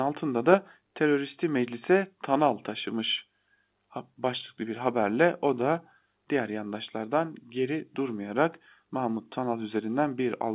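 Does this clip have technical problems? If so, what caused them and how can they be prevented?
No, there are no technical faults in this speech clip; the band stops at 4 kHz, which fits 8 kHz G.711 A-law telephone coding working as intended, so there is nothing to prevent.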